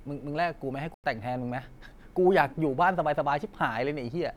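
At 0.94 s the speech goes silent and comes back at 1.04 s, leaving a hole of about 96 ms. This is a digital broadcast dropout. The receiver stopped getting usable data, either through signal loss or failed checksums, and muted its output until valid frames arrived again. A gap of that length fits roughly three lost frames. Whatever was transmitted during that moment is simply missing from the programme.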